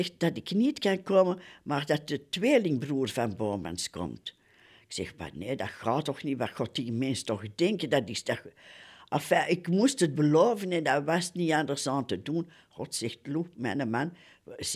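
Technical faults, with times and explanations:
Nothing here needs flagging, since the speech comes across without any technical trouble worth pointing to.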